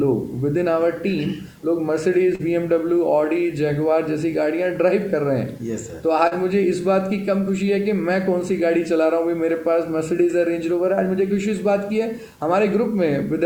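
Low bit depth without dither runs through the whole clip as a grainy distortion that moves with the audio. Quiet passages turn gritty and the faintest parts sputter, with the error sitting roughly 35 dB below the signal. The likely cause is rounding to about 8 bits with no dither. Short concealed packet loss occurs at 2.35 to 2.42 s and again at 6.27 to 6.34 s. About 40 ms went missing each time, and the receiver filled the gap by extending the preceding sound before blending back, leaving a brief smear or wobble.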